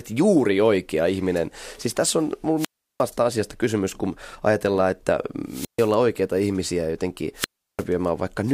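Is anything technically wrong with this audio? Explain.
Yes. The speech has three wireless microphone squelch dropouts, at 2.56 to 3.04 s, 5.47 to 5.93 s and 7.35 to 7.85 s. Each time the analogue FM link weakens, hiss swells, and then the receiver's squelch gate shuts the output off. The silent holes last about 0.35 s, 0.14 s and 0.35 s. On a waveform each appears as a flat gap. On a spectrogram a broadband noise smear leads into a blank column, and the speech returns at the far edge.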